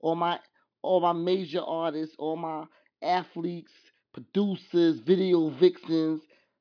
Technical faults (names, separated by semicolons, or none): none